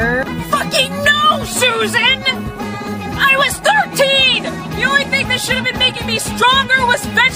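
Nothing goes wrong anywhere in the clip; there's no glitch, gap or disturbance to point to at any moment.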